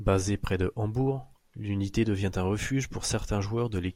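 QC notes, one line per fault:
No faults are heard in this speech recording. Nothing here needs a timestamp or a fix.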